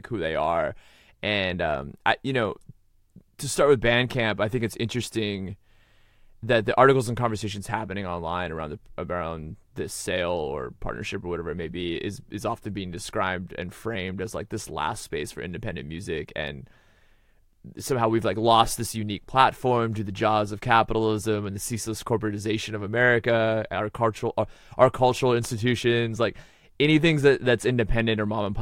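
Listening to the speech from beginning to end, nothing stood out as a technical problem.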